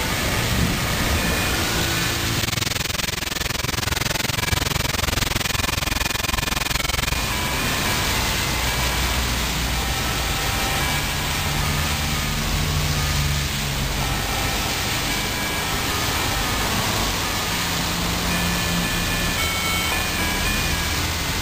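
From 2.42 s to 7.17 s the audio carries overlap-add ripple. The level pumps up and down about twenty times a second, giving a rough flutter. The swing is deep, about 60 dB, so the sound nearly vanishes at each trough. The cause is frame-based processing. The audio was split into windowed frames and rejoined with an overlap whose windows do not add up to a steady gain. Each frame boundary leaves a dip.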